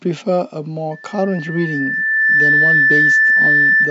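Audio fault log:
0.91–3.9 s, loudspeaker feedback squeal: the microphone is picking up its own loudspeaker, and the loop gain passes unity at 1.8 kHz, so that tone feeds itself, swelling over about one and a half seconds into a squeal around 10 dB above the speech that continues until the end.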